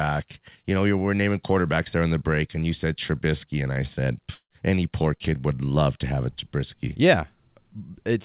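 At 4.34 s, right after "and I said", the speech breaks off for about 0.17 s. The last sound is stretched into a fading buzz for roughly 0.15 s, then about 70 ms of near silence follows. Speech resumes at 4.51 s with "any poor kid would", but about 160 ms of it is simply gone. This is likely a long network dropout, with the receiver concealing the gap and then giving up. Throughout, nothing is heard above 4 kHz, which fits a narrowband call codec such as G.711.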